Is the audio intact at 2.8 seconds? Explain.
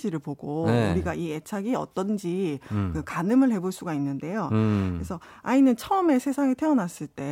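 Yes, the speech at 2.8 seconds is intact, with no audible fault at that moment.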